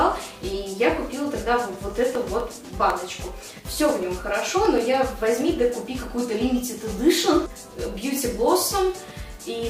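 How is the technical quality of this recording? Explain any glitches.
The recording has one clear fault: periodic USB or driver dropouts between 1.65 and 4.78 s. Every 0.125 s, eight times a second, a background task stalls the bus or driver, and about half a millisecond of audio is lost and replaced by silence, around thirty times in all. Each gap sounds as a tick riding on the signal. Unlike random crackle or buffer underruns, these ticks are strictly evenly spaced and fall silent wherever the sound itself does.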